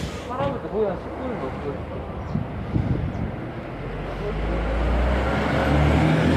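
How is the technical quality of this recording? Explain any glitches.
The recording's technical quality is good, and there are no glitches to explain.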